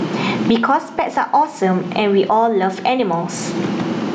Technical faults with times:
0.00-4.14 gain pumping

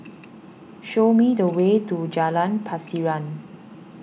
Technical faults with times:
none

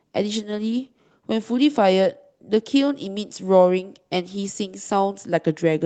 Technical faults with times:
none

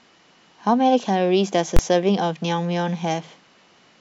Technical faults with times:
1.76-1.79 invalid numbers at full scale

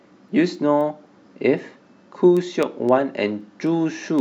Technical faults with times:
0.29-4.19 word clock ticks

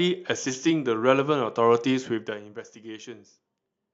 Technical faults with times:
2.05-2.60 zipper noise

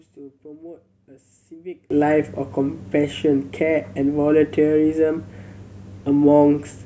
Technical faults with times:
1.90-6.85 sudden gain jump

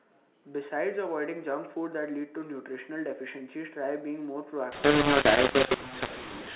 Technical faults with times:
4.72-6.55 mu-law and A-law mixed up

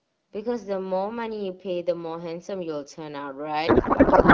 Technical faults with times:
3.67-4.34 codec payload misread

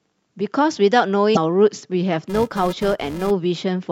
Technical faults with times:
1.33-1.37 damaged data in a compressed stream
2.30-3.31 filter restarted on every block

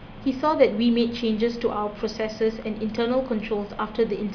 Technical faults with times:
none

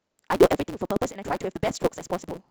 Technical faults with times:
0.00-2.50 block size mismatch (truncated)

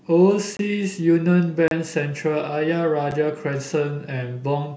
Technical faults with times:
0.57-0.59 block of digital silence
1.68-1.71 block of digital silence
3.11 block of digital silence

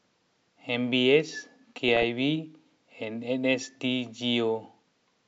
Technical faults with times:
1.88-2.03 DAB burbling

